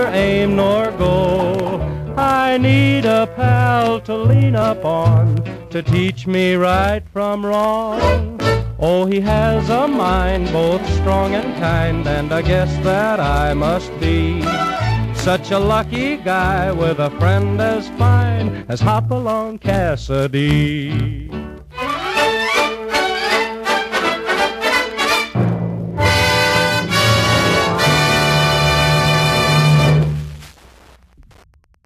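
Wi-Fi interference runs through the whole recording as a steady, faint ticking at close to ten clicks per second, sitting roughly 40 dB below the wanted sound. A nearby Wi-Fi transmitter is coupling RF into the audio circuitry, where a non-linear junction rectifies it into audible pulses. The tick rate follows the access point's beacon interval of 102.4 ms, so the pattern stays rigidly regular regardless of what the audio itself is doing.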